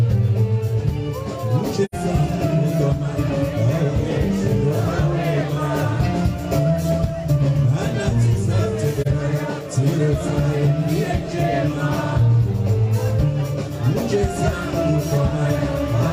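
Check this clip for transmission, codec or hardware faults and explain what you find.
Two short dropouts point to AAC frame loss with muting. The first runs from 1.85 to 1.95 s and the second from 9.01 to 9.07 s. Each time the decoder replaced the missing data with zeroed spectrum. The overlapping windows smear those edges, so the sound fades out and back in rather than cutting hard. The first hole lasts about 85 ms, which fits two lost frames. The second lasts about 43 ms, which fits one.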